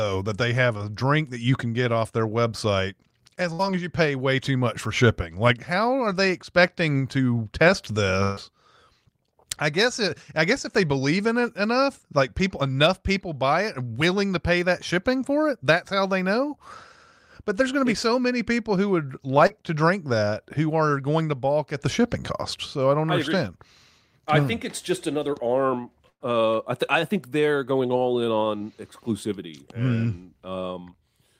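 At 0.77 s, between "that they have" and "drink that you can", there is short concealed packet loss. About 20 ms of audio arrived too late. The receiver bridged the hole by extending the preceding sound for roughly 20 ms, then blended back. It comes through as a brief smear in the speech.

At 3.53 s, after "off their website as", a burst of packet loss begins. It lasts until 3.61 s, just before "as you pay way". About 60 ms never got through. The receiver stretched the last sound for around 56 ms and let it fade. Speech then jumps ahead.

A longer burst runs from 8.23 to 8.39 s. Around 140 ms is gone, and almost all of it is filled with a held, decaying continuation. It sounds like the last sound held and fading before the speech resumes further on.

At 19.47 s, short concealed packet loss returns. Around 40 ms went missing, with about 30 ms patched over. It leaves a quick wobble.

From 26.10 to 26.22 s, after "it's just another arm", comes a third burst. 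Roughly 100 ms was lost. Concealment covers much of it, then the gap drops to about 50 ms of silence before the audio returns.

At 28.58 s, a last short concealed loss of about 20 ms adds a brief smear.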